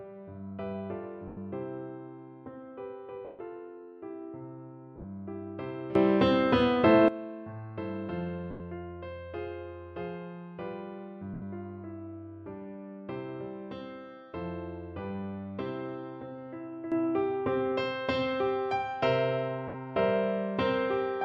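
At 1.28 s the first lost LE Audio frames appear: 90 ms where the LC3 decoder, missing data, repeats the last spectrum with scrambled phase. Any steady tone turns into a hissy smear. On a spectrogram, harmonic lines blur into a flat noisy band. The same happens for 140 ms at 3.25 s, where the fill starts fading toward silence. At 4.96 s the loss comes as short scattered gaps across about 80 ms, none longer than around 20 ms.

At 5.95 s the level jumps up by about 17 dB, with the background noise rising in step, and it stays there until 7.08 s. That points to a sudden gain jump, likely a gain change applied with no ramp. The waveform envelope steps abruptly, and a click may show as a vertical stripe on the spectrogram.

Further frame losses of 90 ms at 8.51 s and 80 ms at 11.34 s leave the same smeared patches. At 16.92 s a second step of about 11 dB lifts the sound and the noise floor together and holds to the end of the clip. 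A final 60 ms frame loss at 19.68 s falls inside that louder stretch.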